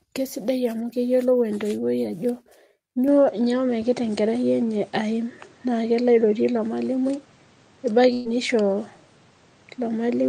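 An input switched to a poorer device, likely the cause of the change at 3.08 s that lasts to the end. With no gap, the band closes above 9.1 kHz, the level shifts by about 5 dB, and a new background noise sits roughly 35 dB below the speech.

A burst of packet loss at 8.13 to 8.27 s removes about 120 ms of audio. The receiver covers 118 ms by extending the last sound and fading it, giving a held buzz or hiss rather than silence, before the speech resumes further along.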